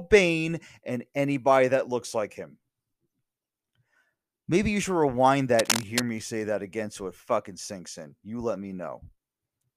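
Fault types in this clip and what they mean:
Cable scratch noise: from about 5.59 to 6.03 s, a burst of dense, ragged scratching and rustling sits over the speech for a little under half a second, loud enough to compete with it at only about 5 dB below the speech level. The likely cause is a worn cable, connector or control being moved, so its contact resistance jumps around rapidly and injects irregular noise directly into the signal path.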